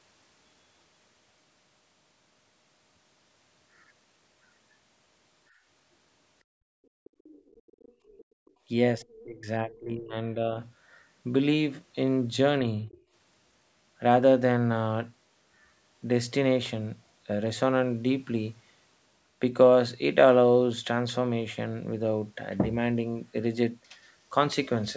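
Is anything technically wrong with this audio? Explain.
Yes, there are three kinds of echo-canceller faults in this speech recording.

Background gated by the echo canceller: the room sound dips at 5.50–5.64 s by about 12 dB, then drops out at 6.44–7.24 s and 7.92–8.62 s by about 34 dB. The canceller clamped the microphone while its loudspeaker was active, so the ambience vanishes abruptly and snaps back on release.

Other side's voice leaking through: from 7.04 to 8.51 s and again at 12.86–13.02 s, a faint second voice sits about 30 dB below the main talker. It is likely residual loudspeaker echo the canceller failed to subtract.

Speech suppressed in double talk: between 8.97 and 10.59 s the talker's level drops intermittently by roughly 25 dB, for about a second in total, with a brief, shallow dip of a few dB at 12.86–12.90 s. This is likely the canceller attenuating both sides when it could not separate the near talker from overlapping echo, so the speech dips.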